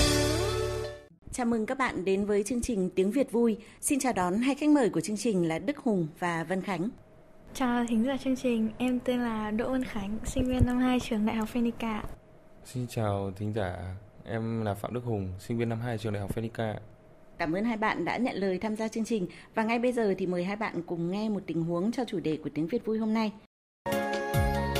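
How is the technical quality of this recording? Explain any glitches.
No technical faults can be heard anywhere in the recording, and the signal stays intact and steady throughout.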